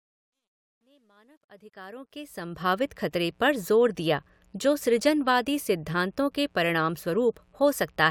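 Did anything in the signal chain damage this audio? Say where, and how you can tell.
Yes. Mains buzz from the analogue wiring sits under everything, a raspy 60 Hz buzz with harmonics at about 40 dB below the speech, likely from poor shielding or a nearby dimmer.

The fade-in up to 2.77 s, just before "खतरे पर जोर दिया", shows truncation distortion: gritty steps, worst from 0 to 1.55 s, which fits an undithered 12-bit gain stage.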